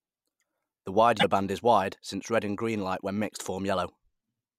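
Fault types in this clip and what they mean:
Broken MP3 bit reservoir: a glitch of about 50 ms at 1.19 s, likely from dropped frames leaving roughly two 24 ms frames decoded from the wrong data.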